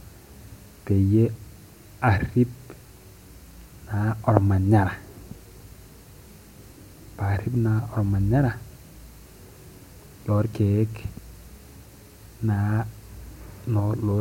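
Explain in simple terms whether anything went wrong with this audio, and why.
Nothing went wrong with this speech recording that a listener can hear. There are no dropouts, glitches or other technical problems anywhere in it.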